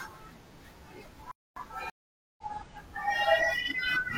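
At 1.31 s the player's output thread was likely starved of data or blocked, a playback stall, so the speech cuts out in mid-flow and the line stays silent for about 250 ms until output recovers at 1.56 s.

At 1.90 s the connection dropped, and the player then reconnected and started a fresh decoder partway through the stream. This stream reconnect leaves a gap of about 480 ms, and at 2.43 s the speech picks up roughly 0.3 s further on, so a short stretch is skipped.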